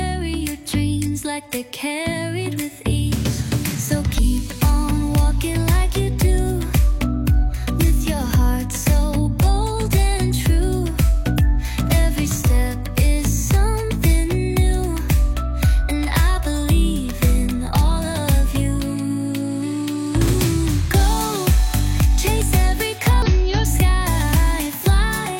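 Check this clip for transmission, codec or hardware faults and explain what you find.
Three brief glitches from damaged data in a compressed stream occur at 4.14 to 4.19 s, 11.34 to 11.37 s and 23.22 to 23.28 s. Corrupted frames make the decoder misread data and resynchronise, producing a short chirp, squawk, click or hole. Each appears as a narrow vertical smear on a spectrogram and a brief disturbance in the waveform.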